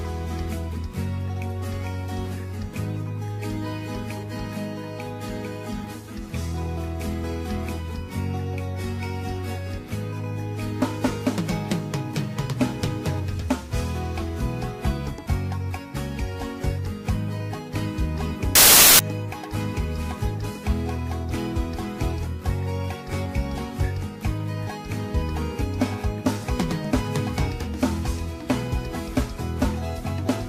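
From 18.55 s to 18.99 s, for a little under half a second, the audio turns into a burst of loud, harsh broadband noise. These are samples built from the wrong bytes. The reader assembled each sample's bytes incorrectly, whether shifted by one byte, in swapped order or with the wrong alignment, so the rapidly fluctuating low-order bits ended up dominating every value.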